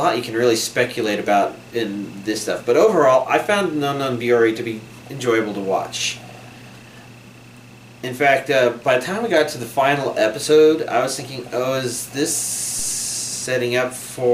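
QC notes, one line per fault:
12.79 s, DC step: the waveform's zero line jumps abruptly by about -26 dBFS, heard as a single low thump while the sound carries on unchanged; the offset then drains away slowly through a 2 Hz high-pass, so no second click follows.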